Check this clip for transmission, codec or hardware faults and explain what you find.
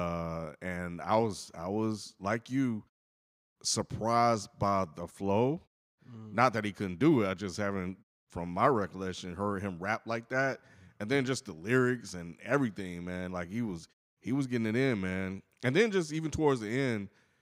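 No transmission, codec or hardware faults turn up in this speech clip, and the muted pauses are just the background dropping out between phrases.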